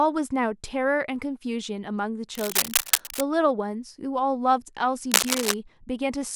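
From 2.35 to 3.21 s, a rough, uneven scratching and rustling sits on top of the speech at about the same level, then returns from 5.11 to 5.55 s somewhat louder than the speech. This is cable scratch noise, likely caused by a worn cable, connector or control being moved, so its contact resistance flickers rapidly and injects dense, irregular bursts of noise into the signal for as long as the movement lasts.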